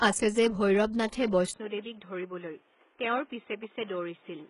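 Throughout, the treble sounds gritty and metallic, likely from heavy HE-AAC compression at 12 kbps; a spectrogram shows copied, blocky upper bands ending near 11.1 kHz.

At 1.52 s, after a 20 ms gap visible in the waveform, the sound turns dull and boxy, likely an input switched to a poorer device: the spectrogram stops near 3.8 kHz, the level drops roughly 5 dB, and a new noise floor sits roughly 30 dB down.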